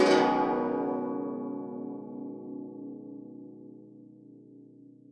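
A piece of music with no technical faults to be heard. Nothing in it calls for a fix or an explanation.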